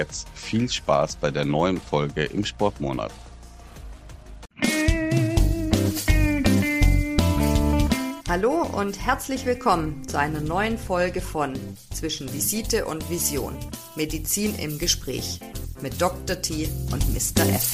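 From 12.20 s to the end, the treble rises sharply: pre-emphasis left on. A high-frequency boost was applied for recording or transmission, but the matching de-emphasis cut was never made afterwards. The tilt follows the 50-microsecond FM curve, lifting 10 kHz about 10 dB above 1 kHz, so the sound turns thin, bright and hissy with exaggerated sibilance. On a spectrogram, energy above a few kHz suddenly brightens at 12.20 s. The waveform shows spikier, denser high-frequency detail.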